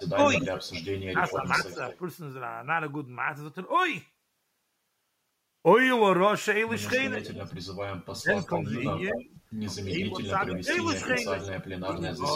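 A faint, delayed copy of the speech trails behind it from 0.0 to 1.98 s and again from 6.95 to 11.51 s, arriving about 220 ms late (218 ms, then 222 ms) and sitting roughly 15 dB below the direct voice. This echo leak likely comes from a far end playing the call over a loudspeaker, where the echo canceller let part of the microphone pickup slip back down the line.

Overlapping those stretches, the speech itself dips. Between 0.14 and 1.79 s it sinks by around 10 dB in patches totalling under half a second. From 7.11 to 12.25 s it drops deeper, by up to about 15 dB, for roughly two seconds in all. This is speech suppressed in double talk, likely because the echo canceller could not tell the live talker from the returning echo while both sides were active, so it attenuated everything.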